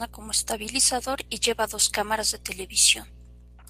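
From 0.99 to 3.27 s there's a call bitrate drop. The encoder gets starved of bits, so speech turns rough and dull, worst for about 1.5 s.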